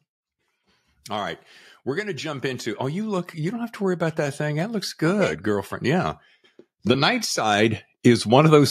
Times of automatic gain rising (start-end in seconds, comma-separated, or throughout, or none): 1.06-6.12, 6.86-8.66